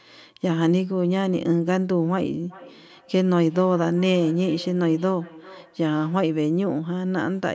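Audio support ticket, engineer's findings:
Feedback echo between two devices, 2.5 to 6.25 s. Speech returns roughly every 0.4 s, thinner and ringier each pass, peaking about 21 dB below the direct speech. A second device in the room is replaying this microphone's send, which gets recaptured. The local echo canceller cannot see that playback. Call microphone path: band tops out at 8 kHz.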